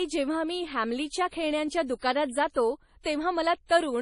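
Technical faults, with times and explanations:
Throughout, MP3 compression: the speech sounds watery and swirly, with metallic s sounds, smeared attacks and nothing above 10.5 kHz. This is likely a bit-starved MP3 encoder, fitting roughly 32 kbps, cutting the treble and dropping weak frequency lines frame to frame.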